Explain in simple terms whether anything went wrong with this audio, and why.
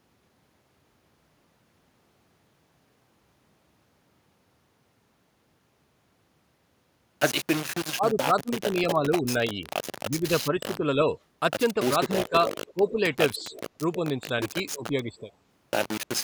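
Yes, several things went wrong. Throughout the clip, the audio was likely stored with far too few levels of loudness, rounded off without dither, in a way that points to only about four bits. The result is low bit depth without dither: a rough, grainy distortion that follows the speech everywhere.

From 7.94 to 9.64 s, 10.1 to 10.99 s, 11.74 to 13.05 s and 13.38 to 15.29 s, both ends of the call were likely talking at once, and the echo canceller turned everything down. This is speech suppressed in double talk. The voice dips, thins out or drops away in pieces, most strongly in the first stretch.

From 12.24 to 13.61 s, the far side's loudspeaker sound likely slipped past its echo canceller and was sent back. This is echo leak. A faint copy of the voice arrives about 0.31 s late, heard as a quieter, delayed repeat.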